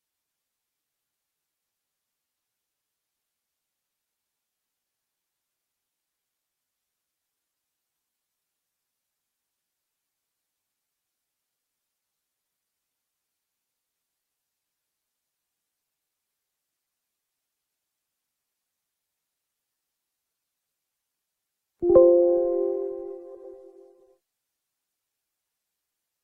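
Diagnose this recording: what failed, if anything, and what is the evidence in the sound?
Frames out of order at 1.14–1.33, 9.38–9.57, 16.21–16.40, 18.14–18.32, 23.34–23.54 and 25.57–25.75 s, at the network or transport stage. Two adjacent blocks of about 93 ms each arrive swapped and are decoded that way, so each stretch flutters with garbled, reversed-sequence sound.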